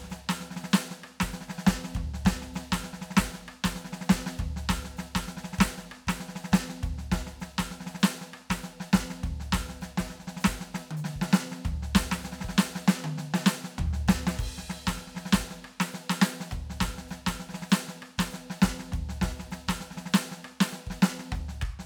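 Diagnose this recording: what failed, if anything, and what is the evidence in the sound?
Nothing in this music recording points to a failure at any stage of the chain. No diagnosis is called for.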